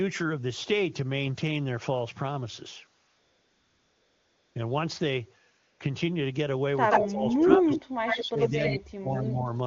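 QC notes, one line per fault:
3.07–4.55 s and 5.59–5.79 s, AMR comfort noise: no speech frames for 1.48 s and 0.2 s, so the real background gives way to a smooth, steady synthetic hiss that switches in and out.
6.90–7.09, 7.50–7.56, 7.72–7.80 and 8.06–8.76 s, echo leak: a copy of the sound returns about 85 ms late, around speech level and at times slightly louder. Likely a loudspeaker echo the canceller failed to remove.
6.94–8.60 s and 8.76–9.48 s, speech suppressed in double talk: the talker dips or cuts out in pieces, by up to roughly 35 and 40 dB. This likely happens because the canceller ducks both sides during overlap.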